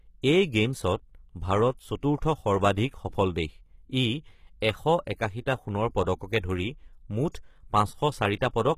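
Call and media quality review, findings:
HE-AAC compression throughout the speech: treble up top sounds gritty and metallic, s sounds lispy, nothing above 14.9 kHz. Likely an HE-AAC encoder copying low bands upward to fake the treble; the damage fits roughly 20 kbps.

Pre-echo at 7.32–7.34 s: short hiss smeared about 28 ms ahead of an attack, which lands soft. Same codec's block-wide quantisation noise, sized for the loud onset, is leaking into the quiet just before it.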